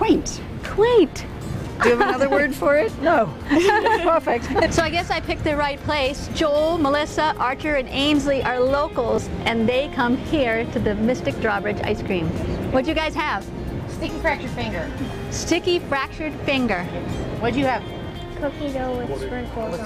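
Three brief stutters and one tiny dropout interrupt the audio. The stutters, at 1.30–1.32 s, 3.82–3.84 s and 9.16–9.18 s, are each a repeated buffer. A 20 ms block plays a second time because fresh samples did not reach the output in time, so the device replayed what it already held. Each repeat starts with a hard join, heard as a click or very short buzz at this small block size, and roughly 20 ms of the real signal is displaced at each point. At 12.08 s a gap between stream segments leaves a 5.6 ms hole of silence with abrupt edges. Two consecutive segments carry timestamps that do not quite meet, and the player pads the difference with zeros rather than dropping any content. The segments are about 4 s long.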